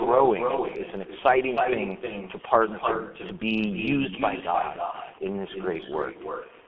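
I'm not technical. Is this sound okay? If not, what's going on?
No. Every bit of speech is followed about a third of a second later by a fainter, hollow repeat. This is echo with no canceller: the far end's loudspeaker is feeding its microphone, and nothing removes your voice before it travels back.

The speech is also muffled and rough throughout, with blurred consonants and a hoarse edge. That comes from the G.723.1 codec, an old, very compact internet-phone format that drops the higher tones and smears detail heavily.

Around 4.91 to 4.98 s, a brief 30 ms stretch is filled in by a stretched, fading sound, then stays weak or distorted for a moment after. This is VoIP packet loss concealed by the speech codec: one chunk of audio went missing, and the decoder guessed at it from the sound just before.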